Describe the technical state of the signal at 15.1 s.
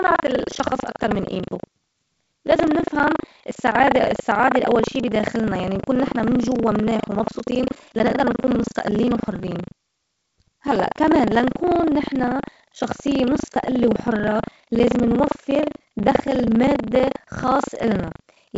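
At 15.1 s the speech carries buffer tearing, present for the whole clip: a steady 25 Hz robotic rattle. Writer and reader have slipped within each period, so roughly a fifth of every 40 ms buffer replays audio from around 70 ms earlier, with hard joins at both edges.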